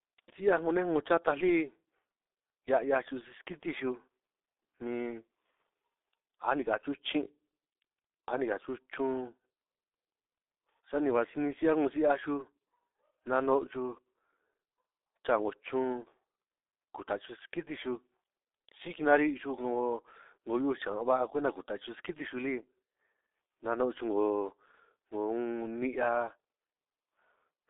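From start to finish the speech carries heavy G.723.1 codec damage. The sound is confined to roughly 300 Hz to 3.7 kHz, with nothing above 3.8 kHz, and its coarse, slow-updating model of the voice, consistent with a rate near 6.3 kbit/s, leaves it muffled and hoarse with smeared consonants.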